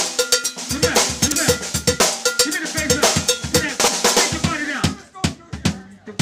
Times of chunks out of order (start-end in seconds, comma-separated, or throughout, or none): 1.28-1.36, 3.80-3.88